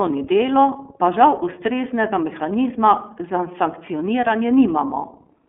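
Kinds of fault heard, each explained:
iLBC codec: narrowband speech coded in self-contained 30 ms frames of the 13.33 kbps mode sounds rough and synthetic; a spectrogram shows energy only between 250 Hz and 3.4 kHz.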